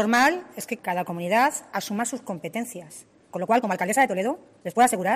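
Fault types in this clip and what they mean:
Time-stretched section: from 3.3 s to the end, the pace abruptly jumps to about 1.61 times faster while pitch stays put, sounding rushed. This likely comes from software squeezing that stretch to fit a length, dropping short pieces to hold pitch.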